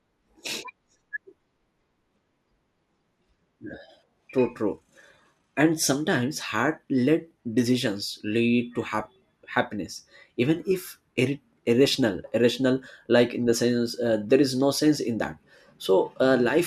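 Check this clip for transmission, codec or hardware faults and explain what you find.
One fault, DAB burbling: from 8.81 to 9.29 s, between "decisions lead to" and "happiness even if", weak reception lets bit errors slip past error correction, so sub-bands jump and short blips of noise appear in single sub-bands across the 24 frames hit.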